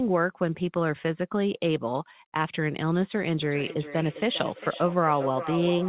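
From 3.42 s to the end of the clip you get a feedback echo between two devices. Two devices on the same call are sitting near each other, so one's speaker feeds the other's microphone and the sound keeps looping, since each echo canceller only removes its own playback. The speech comes back roughly every 0.4 s, thinner and ringier each pass, peaking at about 9 dB below the direct speech. All of it is capped at 4 kHz, which fits a G.711 telephone codec.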